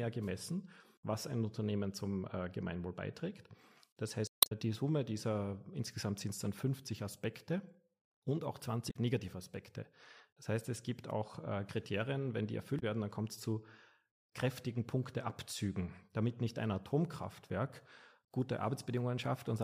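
Damaged data in a compressed stream hits the speech at 4.25–4.52 s, 8.87–8.96 s and 12.76–12.83 s: corrupted frames make the decoder lose sync, producing brief glitches that show as smeared broadband bursts or gaps on a spectrogram.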